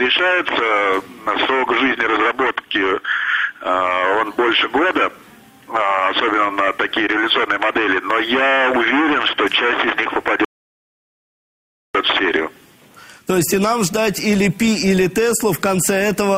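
At 10.45 s the audio stops dead and goes silent. It stays silent until 11.95 s, then picks up exactly where it left off. This is a rebuffering stall. The player used up the audio it had downloaded and had to wait for more to arrive. Nothing is skipped or lost. Instead, about 1.5 s of dead air is inserted into the timeline, pushing everything after it later.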